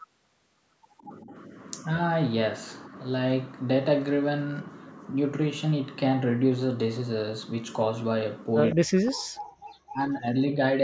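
From 0.97 to 1.03 s, a faint delayed copy of the speech comes back, lagging by 161 ms and far quieter than the talker. This is an echo leak. The likely cause is a far-end echo canceller letting some loudspeaker pickup through.

Three spots sound like speech suppressed in double talk. From 1.05 to 1.34 s the speech dips slightly. From 8.75 to 9.37 s it cuts out almost completely. From 9.91 to 10.42 s it drops clearly. The likely cause is an echo canceller turning down both sides while they talk at once. The band-limit near 8 kHz is just the call's microphone processing.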